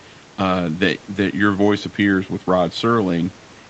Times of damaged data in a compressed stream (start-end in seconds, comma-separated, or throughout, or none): none